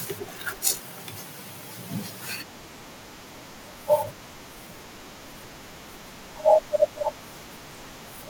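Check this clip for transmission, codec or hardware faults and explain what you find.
There's one fault, clock drift buffer slips: from 1.31 to 8.05 s a click recurs every 1.68 s, likely two clocks about a tenth of a percent apart dropping or repeating small sample blocks.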